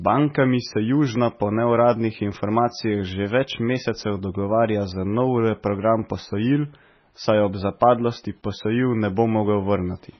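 From start to finish the speech carries heavy MP3 compression damage, likely from encoding at a very low bitrate, which fits something near 16 kbps. Nothing survives above 6 kHz, so sibilants lose their edge, and the remaining band has a watery, swirling texture with chirpy s sounds and smeared consonant attacks. A simple low-pass filter would dull the top without that swirl; here weak frequency lines flicker on and off between frames.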